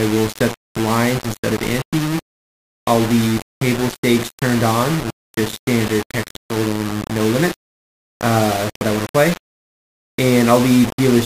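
The audio was likely reduced to low bit depth without dither, rounded to about 4 bits, so the quantisation error tracks the signal and sits only a little below it. The result is coarse, grainy distortion throughout that changes with the sound, with quiet passages breaking into gritty steps or dropping out. From 7.23 to 9.76 s, computer activity noise appears: load changes in the machine disturb the audio circuit's shared ground, adding a faint buzzing chirp pulsing near 1 kHz, well beneath the main sound, that follows the computer's activity rather than the audio.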